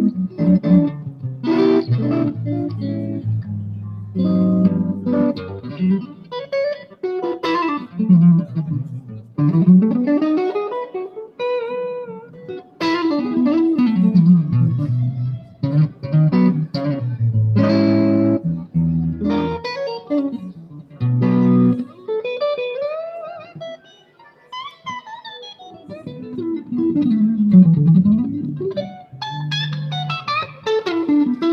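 A speech-tuned noise suppressor has been left running on this audio, which is a clear case of a noise suppressor applied to music or sounds. It treats steady tones, ambience and decaying tails as noise and pulls them down. Sharp onsets mostly survive, but sustained parts sink, so the level swings by around 10 dB and the sound pumps and thins as the processing clamps and releases. The worst stretches are the sound cut by the noise suppressor, and they come at 0.11 to 9.39 s, 11.28 to 12.81 s, 15.41 to 16.04 s, 18.59 to 22.08 s and 23.48 to 24.86 s. In each, held or fading material drops by about 10 to 11 dB below its surroundings. The first span is the longest, with roughly five seconds of audio pushed down in patches. Decays get cut short rather than ringing out naturally.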